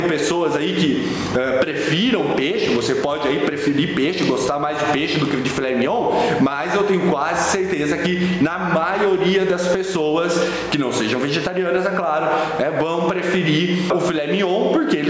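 Gain pumping runs through the whole clip: the gain swings by roughly 10 dB, leaving the dynamics squashed. The likely cause is input gain set far too high, with a fast limiter repeatedly clamping it. The band stops at 8 kHz, consistent with call processing.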